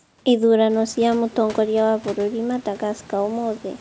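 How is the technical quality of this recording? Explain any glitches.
The speech comes through without any glitches, carried over a call path whose band stops at 8 kHz (consistent with a wideband call codec such as G.722) and with a room background that rises by about 14 dB at around half a second yet stays roughly 25 dB below the voice.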